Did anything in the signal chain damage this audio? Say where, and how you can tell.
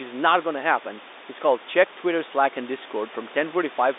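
No, nothing in this speech stood out as damage from any stage of the chain when I listened.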